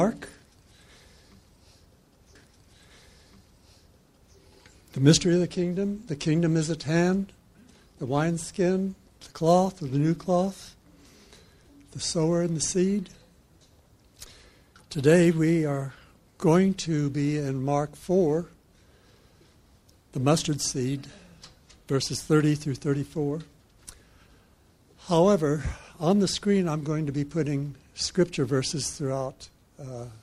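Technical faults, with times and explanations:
2.35 to 4.37 s, stream segment repeated: about 2.02 s of audio plays a second time, adding that length to the running time, with a small blip where playback jumps back to the start of the repeated stretch. The player has fetched or queued the same stream segment twice, so the decoder renders identical material again, and the splice at the jump point lands out of phase, which produces the audible discontinuity.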